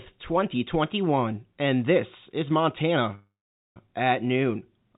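Packets were most likely held up in transit between 3.15 and 3.77 s, so the jitter buffer ran dry and the receiver had to fill about 0.61 s on its own. The result is a call audio freeze: the last sound stretches into a short fading buzz or hiss, then roughly 0.45 s of silence, and the speech resumes exactly where it stopped with nothing lost, now running about 0.61 s later. Throughout, the band ends at 4 kHz, which fits a G.711 mu-law call codec.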